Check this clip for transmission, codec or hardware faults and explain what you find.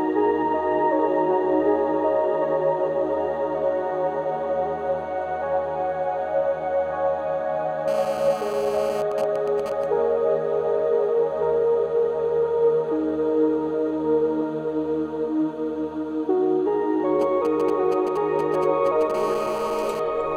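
There is GSM interference from a nearby 2G phone, in two forms.

GSM phone buzz, 7.88–9.02 s and 19.14–20.00 s: the phone's radio bursts, 216.7 times a second during a call, are rectified by the audio circuit. This gives a steady, raspy buzz rich in harmonics, about 13 dB and about 12 dB below the signal. Its 217 Hz pitch sets it apart from 50 or 60 Hz mains hum.

GSM signalling bursts, 9.12–9.84 s and 17.21–19.12 s: the phone sends only short groups of bursts. The first group fits a call with its user silent, and the second fits signalling. Rectified, these make even ticks with a longer buzz twice a second in the first, and a galloping dit-dit-dit of short 217 Hz buzzes in the second, roughly 10 dB and then 15 dB below the signal. The rhythmic grouping distinguishes them from random clicks.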